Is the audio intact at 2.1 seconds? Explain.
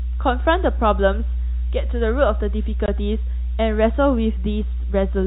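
No. At 2.1 seconds a steady, low 60 Hz drone with some low harmonics sits almost as loud as the speech. This is mains hum, present throughout: a ground loop or nearby transformer couples the power line into the signal, heard through the narrowband telephone-coded audio.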